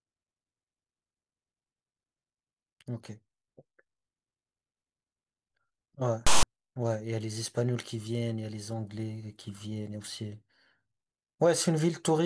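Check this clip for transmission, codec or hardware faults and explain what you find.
One fault stands out: file tags played as audio, from 6.27 to 6.43 s. For about 0.16 s the decoder treats a block of text metadata as if it were sound, so character bytes become sample values. Text gives a loud, harsh rasp that cuts into the speech with hard edges. On the waveform it shows as an abrupt dense block pushed off-centre to one side of zero. On a spectrogram it is a sharply bounded broadband smear.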